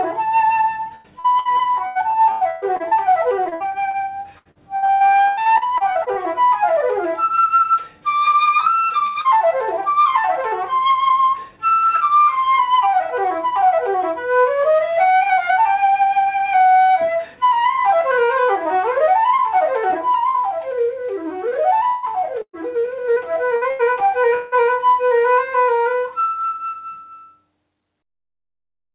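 Band-limited call audio with nothing above 4 kHz, which fits a G.711 A-law path at 64 kbps, carries repeated packet loss (robotic sound) from 0.95 to 6.19 s and again from 21.49 to 24.55 s. The first stretch has 27 gaps, the second 12, and in each about a quarter of the time is patched by extending the last sound. The longest gaps are 119 ms and 180 ms. This gives a choppy texture with pieces missing, unlike a single isolated dropout. At 9.07 to 9.18 s a burst of packet loss removes about 90 ms in one piece. The last sound is held and faded as a buzz or hiss, and the audio then resumes further on with that portion missing. This is one clean hole, not a rapid string of holes. Right after, from 9.21 to 9.28 s, short concealed packet loss fills about 30 ms. It is heard only as a brief smear or wobble blended back into the audio, too short to produce the held, fading tail of the burst before it.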